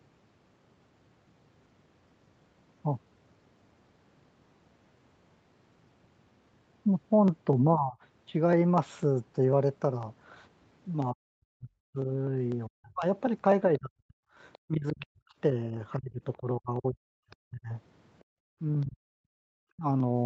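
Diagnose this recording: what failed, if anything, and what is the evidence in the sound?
Periodic USB or driver dropouts, at the driver or buffer stage: from 0.29 s to the end, a small piece of audio goes missing every 0.25 s and the signal simply jumps ahead. That leaves regular ticks, about four per second, audible wherever there is sound.

The speech dips at 7.76–7.97 s by about 20 dB, then from 11.13 to 19.85 s it repeatedly drops away, as deep as about 40 dB, for roughly four seconds in total. This call-processing behaviour is likely speech suppressed in double talk, with the echo canceller attenuating everything while both ends were active.

A second, faint voice is heard at 13.77–14.58 s, about 30 dB below the main speech, and again at 17.30–18.86 s, about 35 dB down. This is likely the other side's voice leaking through, loudspeaker playback that the echo canceller left partly in the microphone path.

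At 18.24–18.31 s the background drops by about 40 dB for roughly 70 ms and then returns. The cause is background gated by the echo canceller: the call processing clamped the microphone hard while far-end audio was playing, and the room sound went with it.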